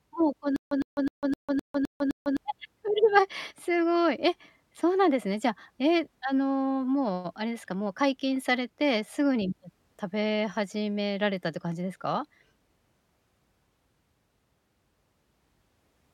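From 0.56 s to 2.37 s the speech falls into a stutter with silent gaps. A fragment of about 107 ms plays, then about 151 ms of dead digital silence follows, and this cycle repeats seven times at a steady 258 ms period. The likely cause is a stalled player or stream that replays its last buffer on each retry and then runs dry. Unlike a plain dropout, the same burst returns identically, and the audio due in that span never arrives.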